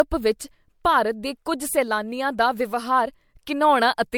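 Speech, likely passed through repeated MP3 encoding about five times at a rate that fits 96 kbit/s, showing generation loss throughout: swirly, hollow, smeared tone with blurred consonant attacks.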